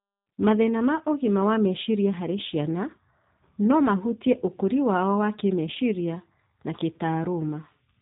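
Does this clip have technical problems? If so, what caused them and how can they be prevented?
Yes. Throughout the speech the sound is thin and boxy, with a rough, slightly buzzy, synthetic edge and nothing above about 3.8 kHz. This is G.729 codec damage. The codec doesn't send the waveform. It rebuilds each short frame from a vocal tract filter, a pitch predictor and a few pulses, and that coarse approximation is plainly audible here. The band limit and texture fit a low-rate link of around 8 kbit/s. To prevent it, carry the call over a wideband codec such as G.722 or Opus at a higher bitrate.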